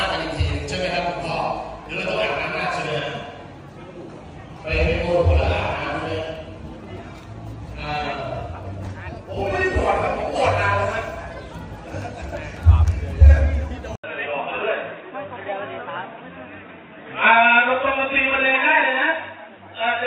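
At 13.96 s the audio drops out for about 80 ms and comes back noticeably different, and it stays that way to the end. It's most likely an input switched to a poorer device: nothing above 3.8 kHz survives, so everything turns dull and boxy. It also sits around 5 dB quieter and carries a new background noise of its own, roughly 35 dB under the signal, which points to a different microphone taking over.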